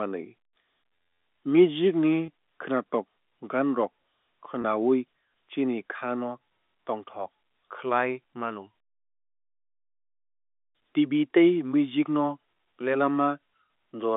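Speech over a telephone-band line (roughly 250 Hz to 3.6 kHz), with three brief buzzy, held-over blips at 2.26–2.28 s, 4.62–4.64 s, and 12.54–12.56 s just after "tei music no". These are packet loss with pitch repetition: about 20 ms of audio went missing each time, which fits a single lost packet, and the receiver filled the gap by repeating the last pitch period.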